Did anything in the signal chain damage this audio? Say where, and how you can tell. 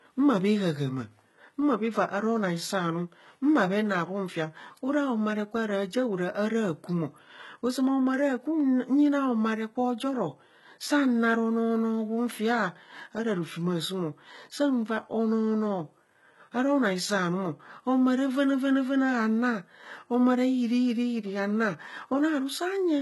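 Yes, at the codec stage, throughout the speech. The treble is present but synthetic: sibilants sound gritty and metallic, and nothing survives above about 11.8 kHz. The likely cause is HE-AAC compression, heavy enough to fit a bitrate near 16 kbps. Spectral band replication copies the coded lower bands upward under a coarse envelope, so upper harmonics fail to line up. A plain low-pass would leave the top dull rather than bright-but-false.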